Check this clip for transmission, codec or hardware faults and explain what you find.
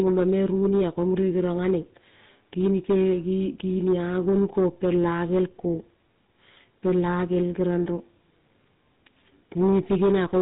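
There's one fault, and it runs through the whole clip: GSM full-rate codec damage, and it's plainly audible. The codec models the vocal tract and excites it with a sparse, regularly spaced pulse train, which gives the speech that buzzy, gravelly roughness. Nothing gets through above 3.8 kHz, so it sounds dull and band-limited. The character fits the old 13 kbps full-rate mode.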